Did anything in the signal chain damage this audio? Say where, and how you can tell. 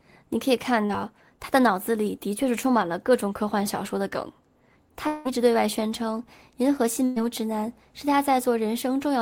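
Yes, the network stage damaged it. There is short concealed packet loss at 0.85 s. About 40 ms never arrived, and the decoder continued the last sound as a brief smear.

From 5.07 to 5.27 s, a fading continuation of the last sound fills about 0.18 s. Speech then resumes further on, without the missing part. This is likely a long network dropout.

There is a burst of packet loss at 7.05 to 7.18 s. About 120 ms went missing. The receiver held and faded the last sound, then resumed past the gap.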